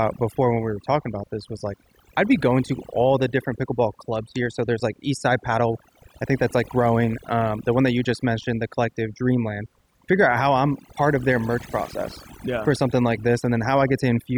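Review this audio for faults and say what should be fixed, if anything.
Overdone noise removal runs through the whole clip. Pauses collapse to near silence with twinkling specks. The reducer cut bands near its noise estimate too hard, taking quiet speech detail with them. Use a gentler reduction setting and check pauses and soft syllables by ear.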